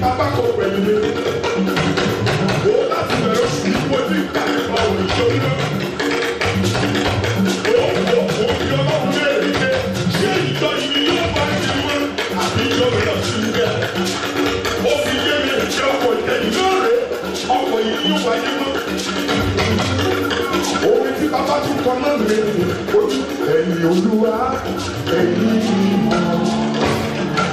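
No technical faults can be heard anywhere in the audio, and the signal stays continuous and stable throughout.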